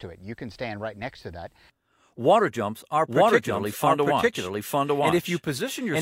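From about 3.08 s until the end, the audio is heard twice. A second, full-band copy trails the original by roughly a second, at about the same loudness, and cuts in abruptly with no decay or room colour, so it reads as a clean repeat rather than an echo. This is a doubled audio track, likely caused by the signal being captured a second time through a slower path, or by an edit leaving two copies out of step.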